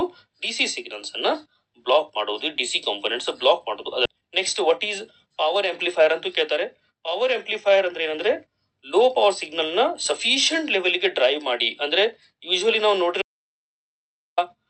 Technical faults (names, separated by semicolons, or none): skip ahead; jitter buffer speed-up; audio dropout to silence